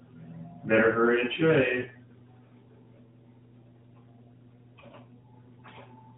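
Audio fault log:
1.82 to 1.87 s, lost AMR speech frame: Right after "hurry and", a single 20 ms frame goes missing. The decoder covers the gap by repeating the last good pitch and vocal tract settings at reduced gain. This gives a brief dip or warble in the narrowband, sub-4 kHz sound.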